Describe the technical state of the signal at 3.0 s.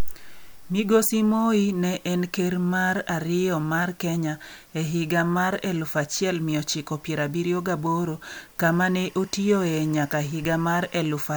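The signal at 3.0 s is intact, with no audible fault at that moment.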